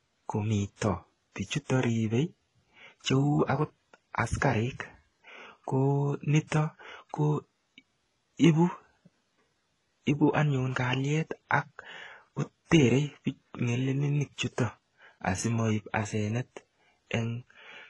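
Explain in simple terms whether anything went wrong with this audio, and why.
Something did go wrong, and it runs through the whole speech clip. The sound is dull, with nothing above about 11.3 kHz, and it has two different kinds of codec damage heard together. That mix points to transcoding between lossy codecs: the audio was likely squeezed as HE-AAC and then re-squeezed as WMA. The second pass wasted effort preserving the first pass's damage and added its own.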